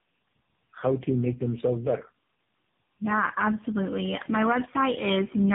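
Right from the start and all the way through, this speech carries tandem speech coding. It sounds like the call was squeezed through three separate low-rate speech coders in a row, with each one re-encoding the previous one's already damaged output. The rough, muffled, warbly texture fits two GSM full-rate hops and a final AMR-NB stage at around 8 kbit/s. There's also nothing above 3.7 kHz, so it's firmly narrowband.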